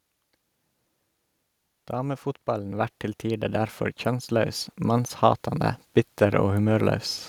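A speech recording with automatic gain rising from 1.92 s to 5.5 s: the gain control judged the input too quiet and lifted it by about 11 dB, so voice and background noise swell together. On the waveform the envelope ramps upward steadily; a spectrogram brightens across all frequencies at once.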